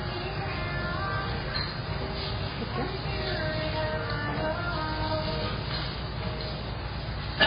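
An everyday sound recording, heavily damaged throughout by likely MP3 compression at a very low bitrate around 16 kbps. Nothing survives above 5 kHz, and the watery, swirling texture separates it from a plain low-pass filter, which would only dull the sound.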